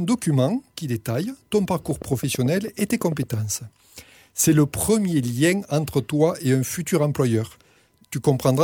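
Regular ticking of about fifteen clicks, 9.1 per second, runs from 1.91 to 3.35 s above the sound: a train of clicks, likely from interference.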